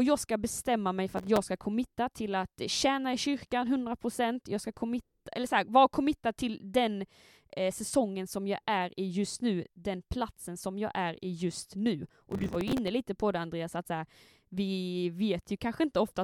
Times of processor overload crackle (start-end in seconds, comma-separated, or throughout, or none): 1.17-1.38, 12.30-12.88